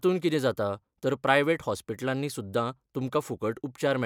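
A speech recording with nothing technically wrong with it.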